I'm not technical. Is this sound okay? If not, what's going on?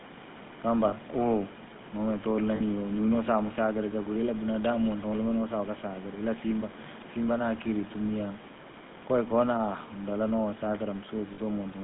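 No, not quite. The whole recording has been through the GSM full-rate codec, the squeeze-it-small system early mobile phones used. It rebuilds the voice from a rough model of the throat plus a buzzy pulse, so everything sounds gravelly and a bit robotic, and the damage is easy to hear. It also chops off the low end and everything above about 3.6 kHz, which gives that thin, old-phone sound.

There are also three short hiccups from lost GSM frames, at 0.88 s, 2.56 s and 11.34 s. Each lasts about 40 milliseconds, which fits a couple of dropped chunks of the signal. When that happens, the phone system fills the gap by repeating the last good chunk. You hear a quick metallic ring or smear instead of a clean gap. The faint background noise of the room is just part of the original recording.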